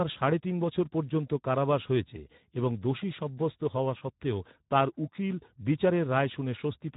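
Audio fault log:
Throughout: Speex codec. The speech is cut off above 3.8 kHz and sounds hoarse and grainy, with plainly audible codec damage. The CELP coder has too few bits to model the excitation, so the buzz driving each syllable is replaced by a coarse, noise-like approximation. The damage fits a low setting of around 11 kbps. A plain low-pass filter would only dull the sound, and here the grain inside the band is what gives it away.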